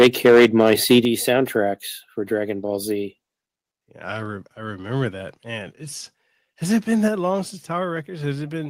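Speech, and the first second, from 0.0 to 0.99 s, suffers microphone overload: peaks run about 9 dB past the converter's limit, so a noticeable fraction of samples are flattened, giving a harsh crackle. The waveform shows squared-off tops, and the spectrogram shows smeared broadband energy above the voice. The likely cause is input gain set too high. The microphone volume is also stepped down three times, likely by automatic gain control reacting to the loudness: about 3 dB at 0.04 s, about 7 dB at 1.05 s, and about 4 dB at 7.08 s, between "has it been" and "long since". Each is an abrupt drop in voice and background together. On the waveform the envelope shrinks suddenly, and on the spectrogram every band dims at once.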